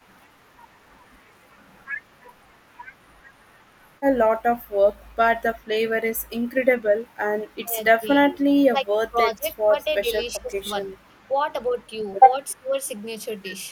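From 7.6 s the speech repeatedly dips in six bursts, at 7.6–7.77 s, 8.0–9.16 s, 9.33–9.46 s, 9.69–10.65 s, 11.07–11.29 s and 12.54–12.73 s. This is speech suppressed in double talk, likely an echo canceller treating the local talker's speech, overlapping the far end, as echo and attenuating it by up to about 30 dB. Unlike packet-loss dropouts, the voice dips, loses its high end or cuts out in pieces.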